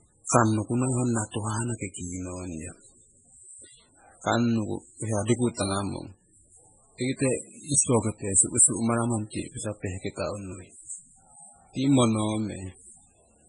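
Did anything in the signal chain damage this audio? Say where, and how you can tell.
Yes. The damage sits at the codec stage and runs through the whole speech clip: the likely cause is heavy MP3 compression, with the sound pointing to a very low bitrate of about 16 kbps. Short of bits, the encoder removed everything above 10.4 kHz, so sibilants lose their top end. It also dropped weak frequency lines that flicker on and off between frames, leaving a watery, swirling texture, metallic chirps on s sounds, and smeared consonant attacks.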